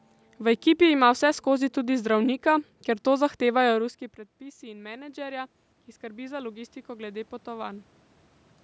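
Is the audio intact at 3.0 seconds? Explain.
Yes, the speech at 3.0 seconds is intact, with no fault at that moment.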